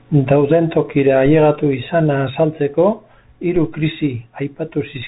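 From start to finish the speech passes through a Bluetooth CVSD headset codec, whose damage is plainly audible. Each sample is coded as a single up-or-down bit, which fits a 64 kbit/s stream, with a step size that keeps adapting. Nothing above 3.8 kHz survives, so s sounds come out scratchy and a grainy hiss sits beneath the speech. Unlike a plain low-pass filter, it also leaves the granular noise and the slope-overload roughness on loud, bright sounds.

At 3.56 s a DC step occurs: the waveform's zero line jumps suddenly to a new offset and then drains away, as a high-pass around 2 Hz would let it. It is heard as one low thump while the speech goes on unchanged. That sets it apart from a dropout or a packet glitch, which would break into the sound itself rather than adding a single bass-heavy bump underneath it.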